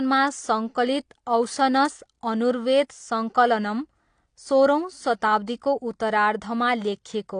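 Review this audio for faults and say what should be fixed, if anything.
AAC compression damage runs through the whole clip. Nothing is present above 9.8 kHz, so the speech sounds dull. Sibilants and held sounds are smeared, with a fizzy, warbling texture. The cause is likely AAC-LC coding, and the band limit fits a 32 kbps bitrate. To prevent it, encode at a higher bitrate and keep an uncompressed master until final delivery.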